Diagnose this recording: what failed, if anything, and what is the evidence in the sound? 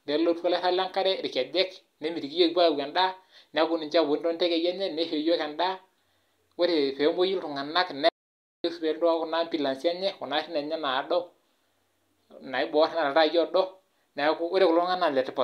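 The speech cuts out at 8.09 s and resumes mid-flow at 8.64 s. This is an audio dropout to silence lasting 0.55 s. The gap is silent, with no room tone. The likely cause is a lost input device or link. The recorder kept writing silence.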